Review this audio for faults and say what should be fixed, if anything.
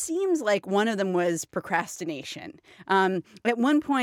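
A gain stage pushed the speech about 1 dB past full scale from 1.74 to 1.76 s, just after "of them was", causing hard clipping: the peaks are sliced flat, adding high harmonics heard as a brief crackle. Leave a few decibels of headroom before conversion to prevent it.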